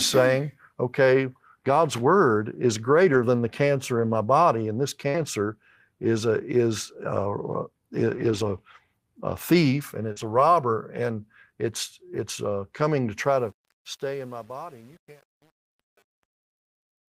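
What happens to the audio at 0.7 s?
Nothing goes wrong at 0.7 s: the speech there is intact, with no dropout, click, distortion or level change.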